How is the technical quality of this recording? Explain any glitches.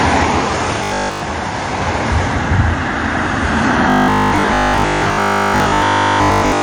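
The quality is poor. Two faults are audible.

Throughout the clip, the top end is cut off and sounds smeared and swirly with mixed artefact textures. This is likely transcoding between lossy codecs: an MP3 stage then AAC-LC, which fits low bitrates near 64 and 32 kbit/s. Each pass adds damage on top of the last.

From 0.84 to 1.22 s, the sound becomes a rigid, metallic buzz at 50 Hz. This is robotic sound from repeated short buffers, which fits a 20 ms buffer. Here the audio is replaced entirely by repeats, so real content is skipped.

From 3.9 s to the end, the same 50 Hz buzz returns. Most of the audio in this stretch is repeated buffer material. The likely cause is again the same: audio arriving too seldom, with the gaps filled by looping about 20 ms.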